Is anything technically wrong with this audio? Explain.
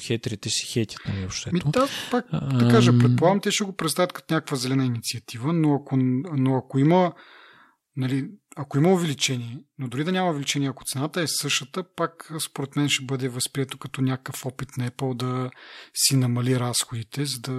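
No, nothing technically wrong can be heard here.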